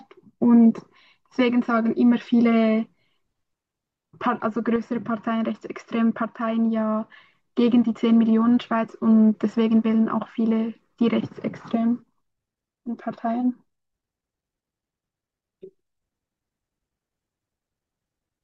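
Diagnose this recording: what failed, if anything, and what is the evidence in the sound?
A sudden gain jump drops the speech and its background noise together by about 5 dB at 4.76 s, restoring at 7.12 s. The waveform envelope steps down abruptly and the spectrogram dims uniformly across frequency, likely from an unramped digital gain change in call processing.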